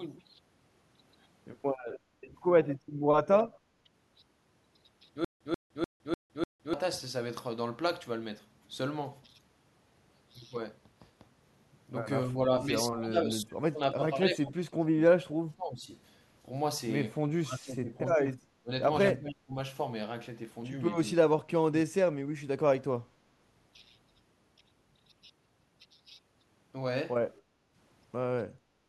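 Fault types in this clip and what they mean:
Speech suppressed in double talk: from 2.27 s, the talker dips by about 10 dB at 2.27 to 2.34 s and about 15 dB at 3.84 to 3.89 s, then loses far more at 12.28 to 15.9 s, 17.36 to 18.7 s, 19.13 to 19.55 s and 21.42 to 22.49 s, with drops of about 20 to 30 dB. This is likely an echo canceller that could not tell the near talker from loudspeaker echo while both sides spoke, so it turned the speech down in pieces.
Stutter with silent gaps: from 5.25 to 6.74 s, a 138 ms burst of speech plays, falls into 160 ms of digital silence, then plays again, five times in all at a steady period of 298 ms. This likely comes from a stalled player or stream that replayed its last fragment at each retry and then ran empty. Whatever should have sounded during that stretch never arrives.
Background gated by the echo canceller: at 27.4 to 27.73 s and again at 28.61 to 28.88 s, the room sound dips by about 8 dB and then about 7 dB, each time for roughly 0.3 s, before recovering. 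While the loudspeaker was active, the echo canceller pulled the microphone down hard, taking the ambience with it, and released it once the playback stopped.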